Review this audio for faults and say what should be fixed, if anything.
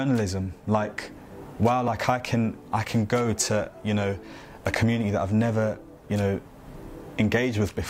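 At 1.88 s there is a block of digital silence lasting about 1.3 ms. The signal drops straight to zero and returns with no fade, so both edges are hard discontinuities that merge into a single tick rather than an audible hole. A gap this short fits one missed 64-sample buffer, where the output stage ran dry because processing did not deliver the block in time and zeros were written in its place. To prevent it, give the audio callback more headroom with a larger buffer or lighter per-block processing, and check for underruns during the render.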